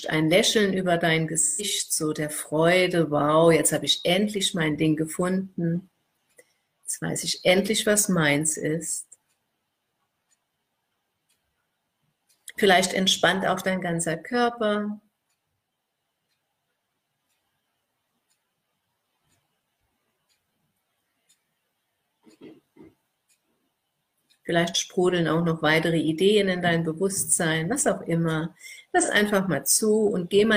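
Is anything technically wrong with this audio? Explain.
Yes. There is AAC frame loss with concealment at 1.40–1.63 s and 29.01–29.09 s. Lost frames were rebuilt from the last good spectrum, leaving brief smeared, noisy patches of about 128 ms and 43 ms, which fits three lost frames and then one.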